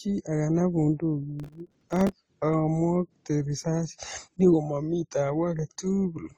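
From start to finish the speech carries the layered damage of transcoding between lossy codecs. The likely cause is an AAC-LC encode at a low bitrate, around 24 kbit/s, later re-encoded to Opus at about 32 kbit/s. Nothing sounds above 12.2 kHz. Smeared, watery detail from the first codec sits under a second, differently textured graininess. That mix of two unlike artefact types, rather than one consistent coding sound, sets it apart from a single low-bitrate encode.

From 1.40 s to 2.13 s, a gritty burst of processor overload crackle tears across the speech. Audio buffers of roughly 3 ms kept missing their deadlines, dozens of times in a row. Each miss replayed a scrap of old audio with hard edges, and the string of tiny repeats and discontinuities merges into crackle that stops cleanly once the load eases. Its dense, even texture and the fact that it is confined to one stretch distinguish it from isolated dropouts or from clipping, which would follow the loudness of the speech.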